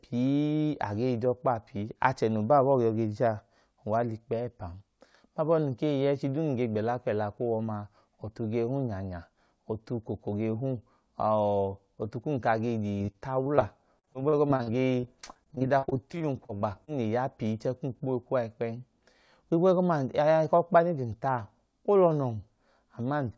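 Repeated packet loss (robotic sound) runs from 12.98 to 13.63 s, just after "ọtu kum ka age", then again from 13.99 to 16.89 s, ending before "le ya pii chẹẹ". Lost packets leave many short holes, each patched by stretching the previous speech, leaving choppy speech over a band that stops near 8 kHz.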